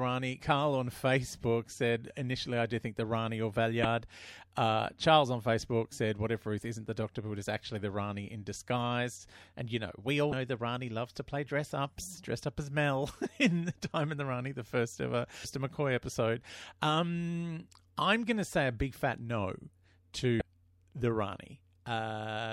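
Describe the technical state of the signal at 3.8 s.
Damaged data in the compressed stream at 3.82 to 3.85 s: corrupted bytes make the decoder misread frames and lose sync, producing a brief chirp or blip.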